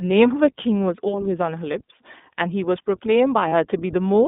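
Throughout, the speech carries the iLBC codec's slightly rough, synthetic texture within a narrow 200 Hz to 3.6 kHz line band. Its plainly audible damage fits a 15.2 kbps, 20 ms frame mode.

At 1.72 to 1.75 s and 3.48 to 3.53 s, lost iLBC frames are concealed by a briefly held, buzzy repeated pitch cycle, about one and then two frames long. Unlike a dropout, there is no silence. Unlike smearing codecs, the voice recovers almost at once afterward.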